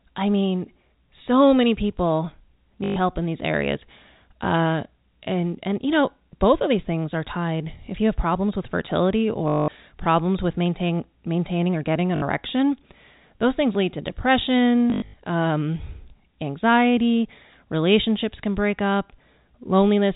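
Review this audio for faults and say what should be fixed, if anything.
Short robotic stutters with a 50 Hz buzz, which fits 20 ms packets, come from packet loss with the last packet repeated. They occur at 2.84–2.96 s after "mean so many people", 9.48–9.68 s after "have problems with fertility", 12.16–12.22 s after "maintaining or getting an", and in scattered bursts over 14.9–15.14 s. Each time, the receiver replayed a stale packet. To prevent this, use a larger jitter buffer, forward error correction, or proper packet-loss concealment instead of plain repetition.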